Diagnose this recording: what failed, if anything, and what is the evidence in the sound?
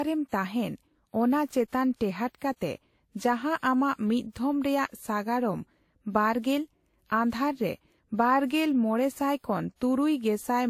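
The failure sits at the codec stage and runs through the whole speech recording: transcoding between lossy codecs. Nothing is present above 16.6 kHz, and two distinct kinds of coding artefact are heard together. That combination is likely a low-rate Vorbis encode, around 45 kbit/s, re-encoded to WMA at roughly 64 kbit/s. The later encoder spends its bits reproducing the earlier artefacts and adds its own, while the lowest band limit in the chain carries through.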